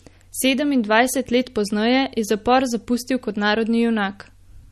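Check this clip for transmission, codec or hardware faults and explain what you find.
One codec fault runs through the whole recording. From start to finish the speech sounds watery and swirly, with nothing above 12.6 kHz and plainly audible chirping on s sounds. This is likely MP3 compression at a low bitrate, around 40 kbps, where the encoder cuts the top band and lets weak frequency lines flicker between frames.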